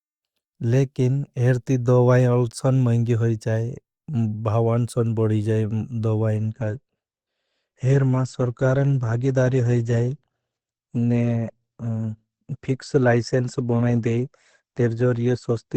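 Speech that drops in quality abruptly at 6.37 s and stays degraded through to the end, with no gap or dropout at the switch. That's an adaptive stream at a lower bitrate: the player stepped down to a leaner version, which sounds like roughly 64 kbit/s Opus falling to about 16 kbit/s. From there the treble is gone above 8.5 kHz, so the voice turns dull, with more codec smearing.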